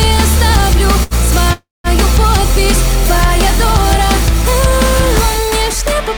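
At 1.03 s there's a short stall from a late packet, running to about 1.14 s. The last bit of sound gets held and stretched for roughly 73 ms, with a slight buzz or dip to it, and then things pick up exactly where they left off. Nothing goes missing; the packet just showed up late, the jitter buffer ran dry, and the receiver padded the wait, so everything after lands 73 ms later.

Then at 1.53 s you get a proper call audio freeze, lasting to 1.87 s. The sound hangs, smears into a fading buzz or hiss, and for about the last 190 ms drops to silence before resuming from the same spot. That's 315 ms of filler with nothing lost, pushing everything later by the same amount. It's likely packets held up in transit long enough to empty the jitter buffer completely, with the receiver concealing the gap until they arrived.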